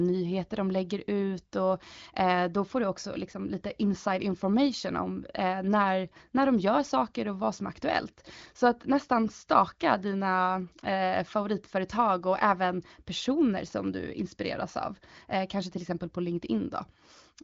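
No technical faults are audible.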